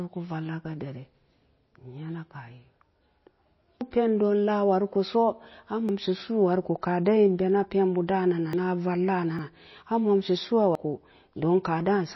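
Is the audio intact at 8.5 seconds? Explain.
No. At 8.53 s there's a jump in the sound, where about a tenth of a second of speech simply vanishes with no gap of silence. That's a dropped buffer (overrun): the program likely didn't collect its samples in time, the hardware overwrote them, and the two sides got spliced straight together.

That moment also carries the MP3 compression damage that runs through the whole clip: a watery, swirly quality as weak frequency detail flickers in and out. It's plainly audible, and the likely cause is a very low bitrate, something around 24 kbps.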